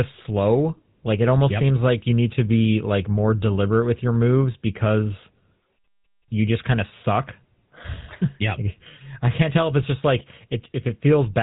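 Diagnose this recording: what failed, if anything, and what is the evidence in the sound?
The codec stage failed to preserve quality: the speech ran through the GSM full-rate codec for its whole length, and the damage is plainly audible. The regular-pulse excitation, rebuilt from a decimated residual, leaves a buzzy, gravelly grain, and nothing above 3.8 kHz survives, which fits 13 kbps full rate.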